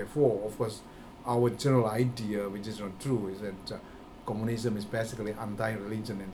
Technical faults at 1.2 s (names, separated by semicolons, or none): none